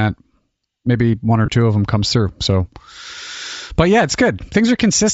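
Throughout, the speech was likely squeezed through Bluetooth LC3 compression at a low bitrate, around 32 kbps. The codec drops much of the upper spectrum and fills it with noise, so the voice carries a plainly audible breathy, grainy edge.

Lost LE Audio frames interrupt the stream three times. Between 1.46 and 1.48 s, after "maybe one or" and before "two of them comes", about 20 ms goes missing, which fits two lost 10 ms frames. Single 10 ms losses follow at 2.97 s and 4.80 s. Each time, the decoder fills the gap by reusing the previous spectrum with scrambled phase, which makes a brief noisy smear across the speech.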